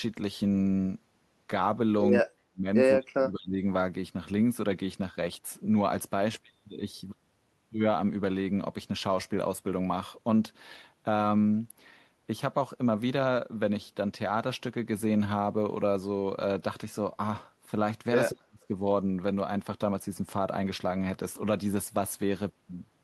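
Speech suppressed in double talk appears at 2.22 to 2.67 s, 2.97 to 3.6 s and 18.3 to 18.7 s, where the speech sinks by as much as roughly 40 dB and is turned down for roughly 0.4 to 0.7 s at a time. The likely cause is an echo canceller that, with both ends talking together, could not tell the near talker from loudspeaker echo and attenuated everything it picked up.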